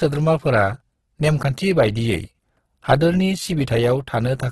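A low-bitrate encoder in its music mode likely squeezed this speech clip, pointing to Opus compression at around 12 kbps, with heavy damage: nothing survives above 12.1 kHz, and noise-filled bands leave the sound grainy, rough and hissy throughout.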